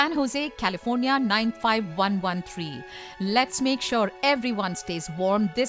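Nothing here calls for comment, since the sound carries on steadily the whole way through with no technical faults to point out.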